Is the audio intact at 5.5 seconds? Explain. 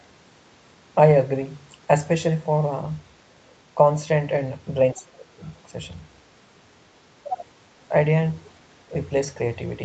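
No. Other-side voice leaking through sits right at 5.5 s, from 5.45 to 5.51 s: a brief scrap of a second voice, very faint at around 40 dB below the speech. This is likely the far end playing from the device's loudspeaker and getting back into the microphone, with the echo canceller failing to remove all of it, so a sliver of that other talker slips into the recording.

Speech suppressed in double talk comes just before, from 4.93 to 5.41 s, roughly half a second in which the speech sinks by around 25 dB at its deepest. The likely cause is both sides talking at once. The echo canceller could not tell the local talker from the loudspeaker echo, so it pulled everything down and the speech dips over that stretch.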